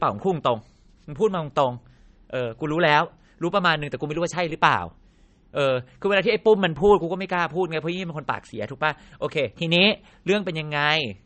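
Throughout the speech, nothing is present above 8.4 kHz, and the sound is plainly watery and swirling, with smeared attacks. The cause is likely MP3 compression starved of bits, which fits a bitrate near 37 kbps: the encoder cuts the treble and lets weak frequency components flicker between frames.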